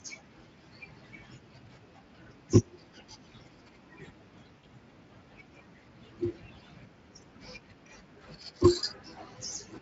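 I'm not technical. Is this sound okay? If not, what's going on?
No. At 4.57 s the call lost a short run of data, about 60 ms, which fits three lost frames. This is VoIP packet loss concealed by the speech codec: the decoder guessed the missing speech from what came just before, so until 4.67 s the voice smears into a brief buzzy or noisy, fading sound.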